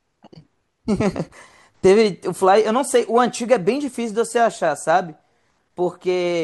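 No technical faults can be heard anywhere in this speech recording.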